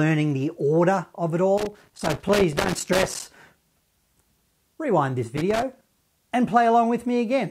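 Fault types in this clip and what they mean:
Loose connector crackle: a worn or dirty contact in the signal path keeps making and breaking as it shifts, so the speech is chopped on and off many times a second, and any DC on the line adds pops at each break. Here it is heard as irregular bursts of crackle and scratching over the speech, a longer stretch from 1.58 to 3.37 s and a shorter one from 5.37 to 5.89 s.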